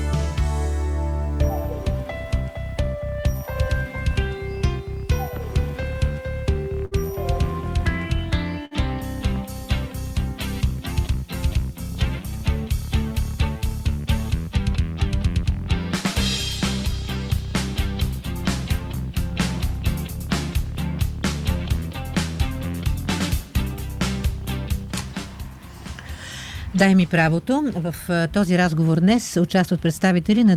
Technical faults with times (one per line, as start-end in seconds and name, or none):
6.85-6.94 burst of packet loss
8.65-8.74 burst of packet loss